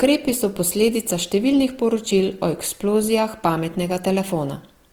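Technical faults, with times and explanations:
Throughout, Opus compression: the speech sounds grainy and rough, with noisy texture filling the upper bands rather than the swirling gaps of MP3, while content still reaches about 20.2 kHz. This likely comes from Opus music mode, which fits a low rate near 24 kbps.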